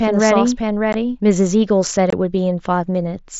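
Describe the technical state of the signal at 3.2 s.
At 3.2 s the speech is intact, with no fault present, and what comes through is the ordinary sound of the mSBC Bluetooth headset link, band-limited to about 8 kHz with its light codec grain.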